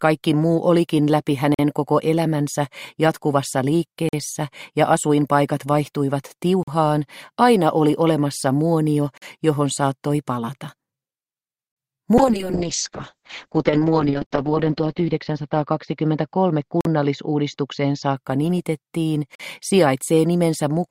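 At 1.54, 4.09, 6.63 and 9.18 s the audio stops dead for 44 ms. These are gaps between chunks. Each chunk plays about 2.5 s, then silence is inserted at the join. Nothing is lost. The sound simply halts.

From 12.18 s to 19.22 s a call bitrate drop sets in. The top end collapses from about 20 kHz to about 8 kHz. The sound turns muffled and rough. At its worst, for about 2.4 s, it points to an encoder starved to a few kilobits per second.

The chunk gaps continue at 14.26, 16.81 and 19.35 s, with the same 44 ms holes at the same spacing.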